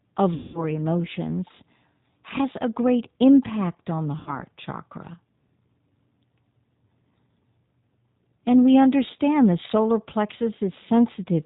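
The whole recording has passed through the G.729 codec, probably the 8 kbit/s G.729A variant. The speech is rebuilt from a vocal tract filter, a pitch predictor and a few pulses per subframe, so it sounds slightly rough and synthetic. On a spectrogram, nothing appears above 4 kHz, and the harmonics look smeared and grainy rather than cleanly striated.

From 0.34 to 0.64 s comes the first case of VoIP packet loss concealed by the speech codec. The decoder had no data and kept extending its last pitch and filter at falling gain, which turns the sound into a buzzy, fading tone. The gap points to about 200 ms of missing audio. The spectrogram shows flat, repeating harmonic bands that dim, and the waveform shows a decaying, overly regular periodic pattern. A shorter repeat follows from 4.19 to 4.42 s, consistent with about 70 ms lost. It has the same stretched buzz, and the sound stays weak as the decoder's state recovers.

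Between 9.63 and 9.66 s, hard clipping cuts the loudest peaks flat, with an overdrive of about 1 dB. It is a brief crackle on the peak rather than sustained fuzz. The waveform shows a few flattened tops, and the spectrogram shows a short vertical smear of added high harmonics at that instant.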